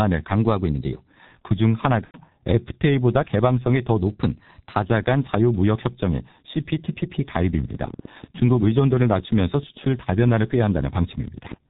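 The whole clip is speech squeezed through a G.723.1 codec, and the damage is heavy. Nothing reaches above 4 kHz. The voice sounds muffled and hoarse. Consonants smear together. This fits a low-rate stream of about 6.3 kbit/s, with the voice model updating only every 30 ms.

From 2.05 to 2.19 s there is VoIP packet loss concealed by the speech codec. About 90 ms of audio is missing, which fits three lost frames. The decoder repeats its last pitch and filter. The sound is stretched out and fades, and the voice stays weak just afterwards.

From 4.01 to 4.83 s a drift correction step is the likely cause of a sudden detuning. Playback runs about 6% fast. Pitch rises by about 101 cents, roughly a semitone. The clock-matching software changed rate in one jump.

From 7.64 to 11.54 s there is a train of clicks, likely from interference or a faulty connection. Around fifty sharp ticks arrive at about 12.3 per second. 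The spacing is uneven. Peaks reach about the level of the speech and tick through pauses too.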